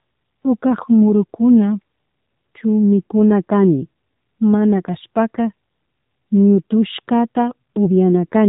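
From start to end the speech carries AMR narrowband mobile codec damage: nothing passes above 3.8 kHz, and the sparse pulse-driven vocal model, at what sounds like about 7.4 kbps, leaves it plainly buzzy and synthetic.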